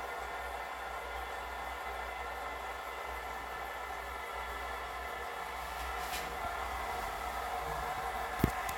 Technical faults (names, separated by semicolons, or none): none